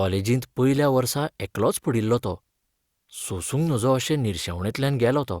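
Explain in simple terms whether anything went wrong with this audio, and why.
Nothing went wrong with this recording.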